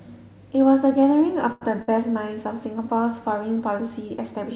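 A speech clip carried over a WebRTC call path, where the jitter buffer twice ran dry while waiting for a late packet, giving two short stalls from late packets. Each time the receiver held the last sound until the packet arrived, stretching it by about 91 ms between 1.52 and 1.76 s and about 58 ms between 1.82 and 1.91 s. Nothing is lost, but the sound drags briefly with a faint buzz or dip, on narrowband audio with nothing above 4 kHz that fits G.711.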